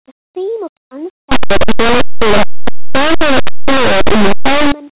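At 1.32 s, right after "theme of", the speech turns into a harsh, very loud roar that runs until 4.72 s. That's linear audio read as companded: plain linear 8-bit samples are being expanded as if they were mu-law codes. Small values just to one side of zero jump to huge outputs while the other side stays tiny, so quiet passages blast and everything tears.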